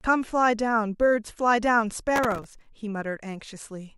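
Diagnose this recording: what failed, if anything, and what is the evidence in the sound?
Processor overload crackle at the driver/buffer stage, from 2.16 to 2.69 s: a gritty tearing over the speech. Dozens of tiny buffers, each roughly 1.5 ms, missed their deadlines and were filled with stale audio. A waveform shows hard-edged discontinuities, and a spectrogram shows broadband vertical streaks.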